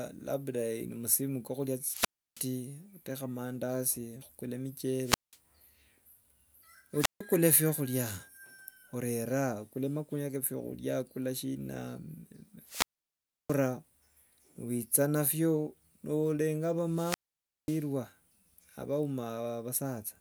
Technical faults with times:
1.84-2.47 wireless microphone squelch dropout
5.01-5.38 wireless microphone squelch dropout
6.98-7.21 wireless microphone squelch dropout
12.65-13.58 wireless microphone squelch dropout
16.85-17.88 wireless microphone squelch dropout

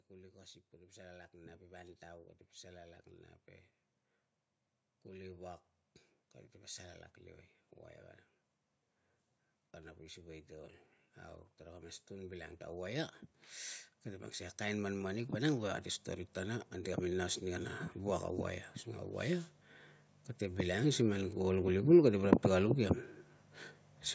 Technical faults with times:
0.09-3.09 automatic gain rising
9.57-21.81 automatic gain rising

